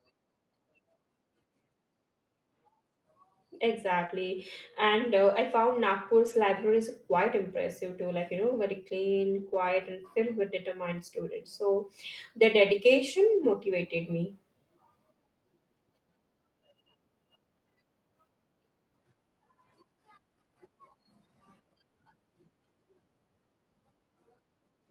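Between 4.07 and 4.20 s there is a short concealed packet loss. About 20 ms of the call arrived too late, and the decoder bridged the hole by extending the preceding sound before blending back into the real audio, adding roughly ten milliseconds. It is heard as a brief smear. On a spectrogram the preceding sound runs on, with no gap in the waveform.

Inside that stretch, at 4.09 to 4.11 s, and again at 6.26 to 6.32, 7.50 to 7.56, 9.30 to 9.44, 10.20 to 10.22, 11.08 to 11.14 and 12.68 to 12.70 s, a lost packet was rebuilt from error correction. Low-bitrate copies carried in the following packet fill 20 to 80 ms spans. These spans sound rougher and noisier, and the spectrogram texture turns grainy without any dropout in the waveform. The 80 ms rebuilt at 9.30 s comes from four separate lost packets.

Throughout the clip, the Opus call path's content stops near 12 kHz on a spectrogram.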